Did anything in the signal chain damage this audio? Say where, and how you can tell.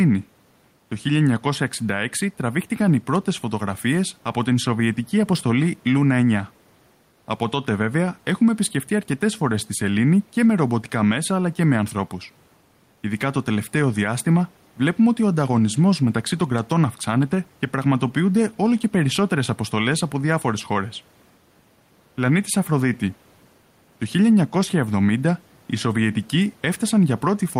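Yes. Gain pumping runs through the whole clip. The gain is pulled down by roughly 5 dB under every loud syllable. The speech sounds squashed and flat. The likely cause is input gain set far too high, with a fast limiter or compressor clamping it down on each peak. The room noise, about 38 dB below the speech, is part of the recording and not a fault.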